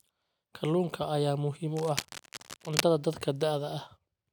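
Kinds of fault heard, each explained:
Cable scratch noise: Right after "ayaa muhiim", from about 1.75 to 2.8 s, a dense, ragged burst of scratching and rustling sits over the speech for roughly a second. It is loud, only a little quieter than the speech itself. The bursts are uneven, not a steady hiss. The likely cause is a worn cable or connector being moved, its contact resistance jumping rapidly and injecting noise into the signal.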